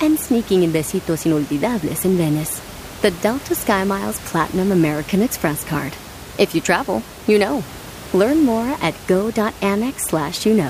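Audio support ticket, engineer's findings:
No system fault found on the speech clip; only the room's own background noise is present, sitting about 17 dB below the speech.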